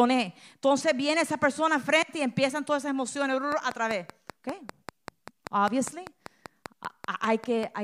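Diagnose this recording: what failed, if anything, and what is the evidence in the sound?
Right after "empiezan todas esas emociones", at 3.52 s, a train of clicks starts and runs to 7.64 s. It's a steady tick at about 5.1 per second, evenly spaced, roughly twenty clicks, each much the same shape and poking out about 10 dB above the speech. You hear them through pauses too. That regular, identical pulse most likely points to interference leaking in on the analogue wiring side from nearby gear, rather than anything in a codec.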